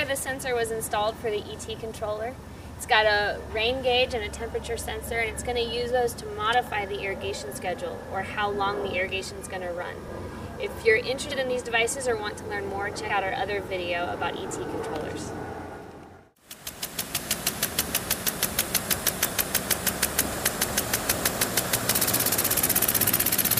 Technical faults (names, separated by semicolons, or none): compressed frames skipped